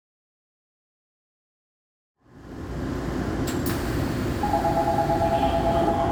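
No technical faults can be heard; the sound simply fades in smoothly from around 2 s, reaching full level at 3.26 s.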